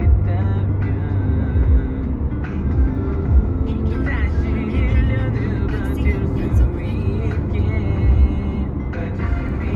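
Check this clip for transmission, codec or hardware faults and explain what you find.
One fault is audible, in the first four seconds.

Channel delay (comb filtering), from 0.0 to 3.9 s: one channel lags the other by only a couple of samples, a fraction of a millisecond. When the two are summed to mono, shared content cancels near 10 kHz, dulling the top end.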